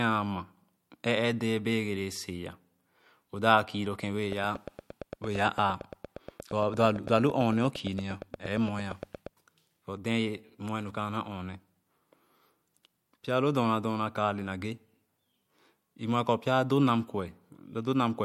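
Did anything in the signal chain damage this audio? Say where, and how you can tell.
Yes. A train of clicks runs from 4.32 to 9.28 s: about forty same-shaped ticks at a regular 8.7 per second, peaking about 5 dB over the speech, pauses included. A spectrogram shows evenly spaced vertical lines and the waveform shows sharp spikes, likely interference in the analogue wiring or interface.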